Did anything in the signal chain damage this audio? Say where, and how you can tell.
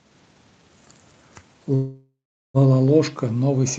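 Yes, a call audio freeze at the network stage from 1.75 to 2.57 s: the sound trails off, then falls silent for about 0.39 s, likely from an emptied jitter buffer. Unlike a dropout, the speech resumes where it stopped, with nothing missing.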